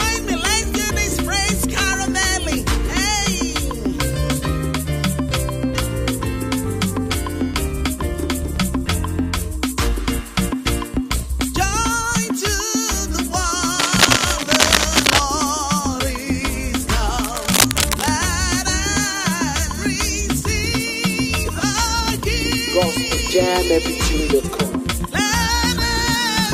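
A worn cable, connector or control was likely moved, its contact resistance fluctuating, and cable scratch noise results: uneven rustling bursts from 13.79 to 15.22 s, louder than the audio, and 17.24 to 18.11 s, about as loud.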